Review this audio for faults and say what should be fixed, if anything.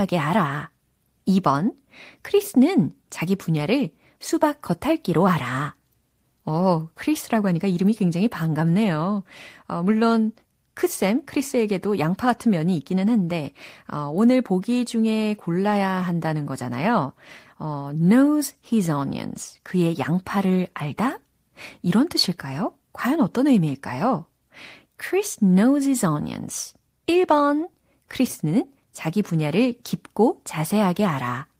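Nothing needs fixing, as no technical faults can be heard anywhere in the recording. No repair or change to the signal chain is called for.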